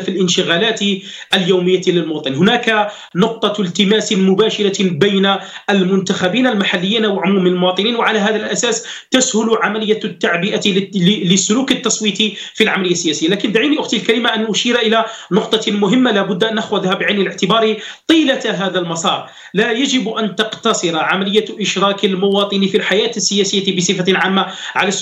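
No technical fault can be heard anywhere in this audio. There is nothing here to time or trace back to a cause.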